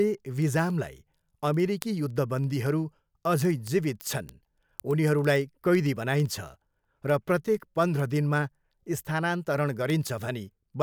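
A digital link between two devices is running without a shared clock, so the receiver keeps slipping against the sender and drops or repeats a single sample each time they realign. The result is word clock ticks from 0.14 s to 10.80 s: sharp clicks of uneven strength recurring about every 50 ms, some two hundred in all, over the speech. That rate points to the two clocks disagreeing by a few hundred parts per million.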